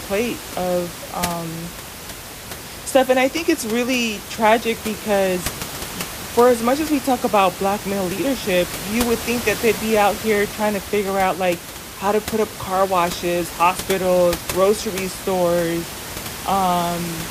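No technical faults can be heard anywhere in the speech. Room noise sits in the background about 12 dB below the speech, and it belongs to the recording space rather than the system.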